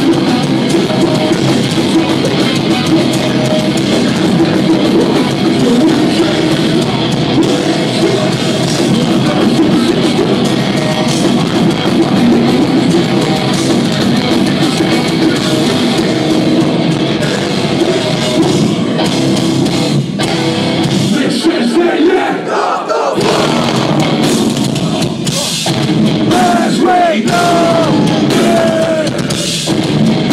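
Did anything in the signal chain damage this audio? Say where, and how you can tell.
No, nothing in the chain from capture to playback leaves an audible mark on this audio.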